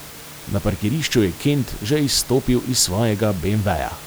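No technical faults can be heard in this speech recording. The room's own background noise sits about 18 dB below the speech, as part of the recording itself.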